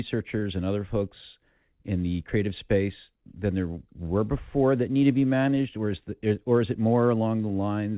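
From 5.77 to 6.34 s the speech briefly hurries: a jitter buffer speed-up. The receiver had built up excess buffered audio and trimmed short pitch-period segments repeatedly, removing around 50 ms. Delivery runs about 7% faster at unchanged pitch, over the G.711 path's 4 kHz-limited band.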